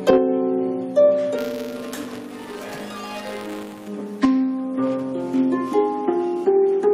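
From 1.38 s to 3.88 s there is buffer tearing. A steady robotic buzz rides on the sound at 200 Hz. That rate points to a buffer period of about 5 ms. The writing side and the hardware reading side have drifted out of step, so their positions cross inside each period. A small sliver of every buffer holds stale audio, around 20 ms old. Hard joins on both sides of that sliver create the rattle, and it is heard only while sound is present.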